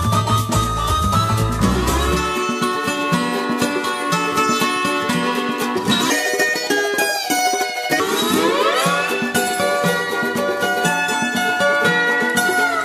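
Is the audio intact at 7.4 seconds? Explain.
No. From 6.10 to 8.00 s a section at the wrong speed plays about 1.67 times too fast. Pitch rises with it, by roughly ten semitones, so the sound turns high and hurried. The likely cause is playback fitted to the wrong clock.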